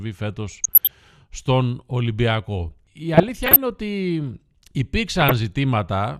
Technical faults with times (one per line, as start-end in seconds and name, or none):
0.49-1.04 DAB burbling
3.14-3.57 DAB burbling
5.18-5.35 DAB burbling